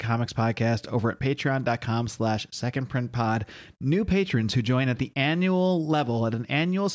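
No technical faults are audible anywhere in the speech recording.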